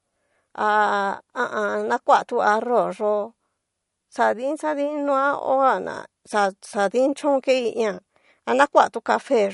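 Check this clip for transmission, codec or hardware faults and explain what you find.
One codec fault runs through the whole speech clip. Throughout, there is no content above 11.2 kHz and plainly audible swirly, watery artefacts. This is likely MP3 compression, consistent with a low bitrate near 48 kbps: the encoder cuts the treble and drops weak frequency lines that flicker between frames.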